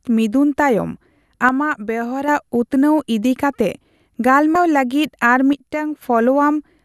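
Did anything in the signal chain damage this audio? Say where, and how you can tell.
Yes. One channel drops out at 1.49 to 2.28 s and 5.53 to 6.02 s. The level falls abruptly by about 6 dB, likely from one stereo channel lost in the analogue wiring before the mono sum.

Compressed frames skipped at 4.55 s, in the codec or storage stage. About 150 ms of audio vanishes, which fits roughly seven 26.1 ms frames being discarded.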